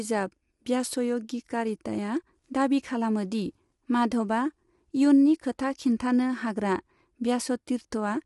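Throughout, the speech sounds rough and grainy, likely from low-delay AAC compression near 32 kbps; a spectrogram shows smeared harmonics and nothing above 11.6 kHz.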